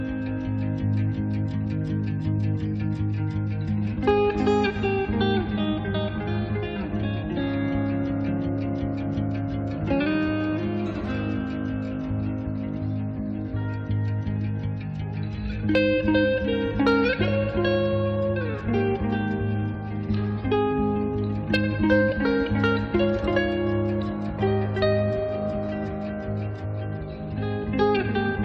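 Brief crackles ride the loudest peaks at 4.08 to 4.11 s, 15.75 to 15.79 s, 16.87 to 17.22 s, 21.54 s, 21.92 to 22.26 s and 22.66 to 22.95 s. This is hard clipping: peaks about 1 to 2 dB over the limit were cut flat, adding high harmonics.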